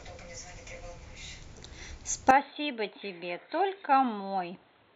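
Input switched to a poorer device at 2.31 s, running to the end of the speech. From that point nothing above 4.2 kHz comes through, so the sound turns dull and boxy, its level drops by around 10 dB, and a faint new background noise appears well below it. The change is abrupt, with no gap at the switch, and is likely the system moving its input to a lower-grade microphone or a headset's narrowband call profile.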